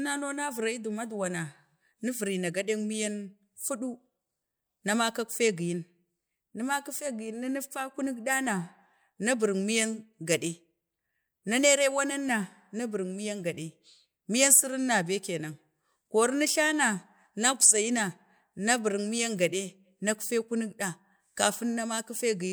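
Speech with no audible faults.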